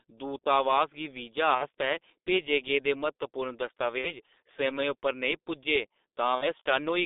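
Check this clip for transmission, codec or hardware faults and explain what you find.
There are two problems here: heavy codec damage across the whole clip and three short dropouts patched over by the decoder.

The G.723.1 codec runs from start to finish. The speech sits in a narrow telephone band of roughly 250 Hz to 3.7 kHz, with nothing above. The quality fits the 6.3 kbit/s mode. At that rate, and with 30 ms frames, the codec's model of the voice can't keep up with fast changes. So the voice comes out muffled and hoarse, and consonants smear into each other. The damage is heavy throughout.

VoIP packet loss concealed by the speech codec shows up three times: 1.55 to 1.68 s, 3.98 to 4.12 s, and 6.35 to 6.47 s. Each gap fits two lost 30 ms frames, about 60 ms of missing audio. The decoder fills each gap by carrying its last pitch and filter forward and turning the level down frame by frame. 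You hear a brief, fading smear of buzz or coloured noise instead of clean speech. Because each frame builds on the one before it, the concealment stretches to about 0.12 to 0.14 s before the voice recovers.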